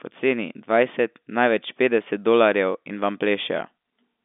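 No technical faults are present in the speech: it carries the narrow band of G.711 telephone coding, running from about 250 Hz to 3.6 kHz with nothing above 3.7 kHz, which fits a 64 kbps mu-law line.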